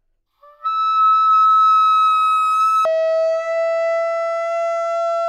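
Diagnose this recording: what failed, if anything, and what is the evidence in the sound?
Stereo read as mono at the sample-format stage from 2.85 s to the end: interleaved channels played as one, so half speed, an octave low, with a mirrored upper-band spectrogram image.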